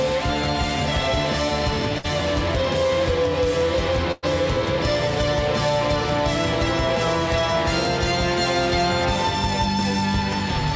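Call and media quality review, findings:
Burst of packet loss, 1.98–2.06 s and 4.12–4.25 s: jitter-buffer concealment extends the last frame into a fading buzz or hiss, skipping 60 and 100 ms. Spectrogram shows smeared, decaying bands, then an abrupt restart, under the G.722 path's 8 kHz ceiling.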